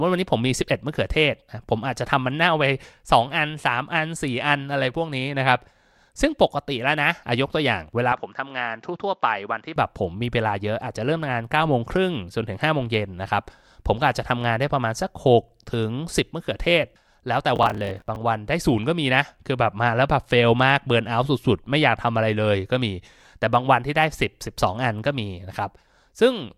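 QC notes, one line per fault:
8.12–9.76 s, input switched to a poorer device: the speech turns duller and boxy, about 5 dB quieter, with nothing above 7.6 kHz and a faint new noise floor roughly 50 dB down, then clears again. No silence at the switch. Likely a change to a narrower-band microphone or headset profile.
17.56–18.16 s, processor overload crackle: a gritty, tearing crackle rides on the speech for about 0.6 s. Around thirty roughly 10 ms deadlines are missed over that stretch, each filled with stale audio whose hard edges click, together forming the burst.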